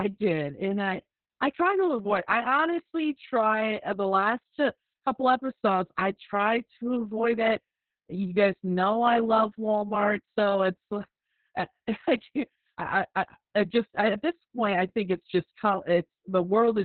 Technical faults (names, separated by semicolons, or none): Opus voice compression